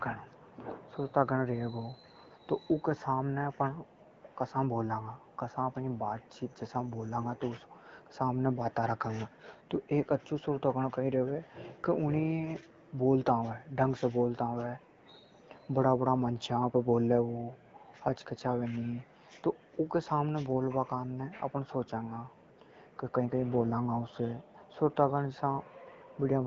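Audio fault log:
Nothing to log here: the speech comes through the AMR wideband (HD Voice) link at 12.65 kbit/s with no faults to report.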